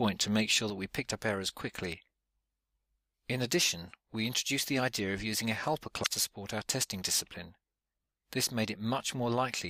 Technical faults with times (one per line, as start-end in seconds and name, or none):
0.70-9.70 sudden gain jump
6.00-6.07 damaged data in a compressed stream